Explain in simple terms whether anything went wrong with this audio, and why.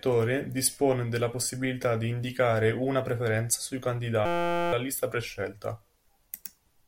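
A system hang loop: after "indicare una preferenza sui", from 4.26 to 4.73 s, a 5.8 ms scrap repeats into a steady 172 Hz buzz, not silence or stutter, before "lista prescelta".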